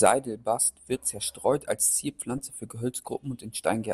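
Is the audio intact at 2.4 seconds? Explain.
No. A corrupt frame decoded from 2.38 to 2.42 s, just after "wird zerstreut als", damages the audio at that point. Flipped bits in a couple of compressed frames went undetected, and the decoder rebuilt them anyway. Misread gains and codes put energy at the wrong frequencies for roughly the length of those frames. The result is a brief chirp or blip of wrong-frequency sound, peaking at around -30 dBFS.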